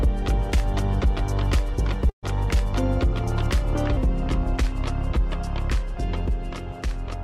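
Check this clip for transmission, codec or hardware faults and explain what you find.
Two faults stand out, a dropout and a later speed error.

Burst of packet loss, 2.09 to 2.25 s: about 140 ms of audio never arrived, so the receiver stretched and faded the last sound into a brief held tail before resuming.

Section at the wrong speed, 3.97 s to the end: playback runs at 0.891 times normal, roughly two semitones low, slow and deepened, likely from a mismatched clock during editing or playback.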